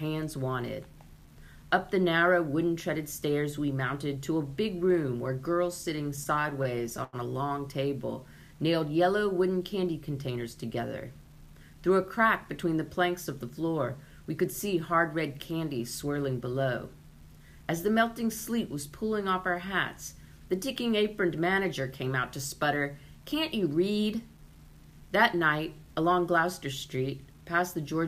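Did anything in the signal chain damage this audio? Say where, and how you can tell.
Yes. Low bit depth without dither runs through the whole clip: quiet passages sound grainy, with distortion that follows the sound and a noise floor around 35 dB below it. This points to a sample-format conversion stage, likely truncation to about 9 bits with no dither.

Repeated stalls (stutter) occur from 5.83 to 7.16 s. The jitter buffer ran dry 13 times, and each time the last sound was held, up to 93 ms per stall and 217 ms in all. This drags the passage into a stutter, a network or buffer fault.

Jitter buffer speed-up occurs at 23.74 to 24.38 s and again at 27.41 to 27.75 s. After excess audio built up, the buffer cut short pitch-period pieces, about 70 ms and then about 50 ms. The sound runs at 110% and then 113% speed while keeping its pitch.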